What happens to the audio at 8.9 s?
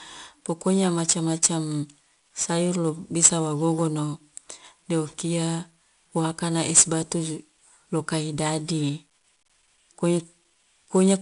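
Same as the rest of the clip: 4-bit ADPCM compression, its coarse predicted steps leaving a gritty hiss that tracks the speech level, and nothing above 10.6 kHz.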